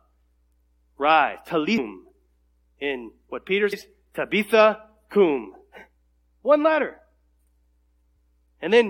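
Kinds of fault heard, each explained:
Damaged data in a compressed stream: corrupted bytes make the decoder misread frames and lose sync, giving three brief glitches in this speech, near 1.77, 3.72 and 8.15 s, each under 20 ms. A spectrogram shows short broadband smears; the waveform shows an abrupt glitch with a discontinuity.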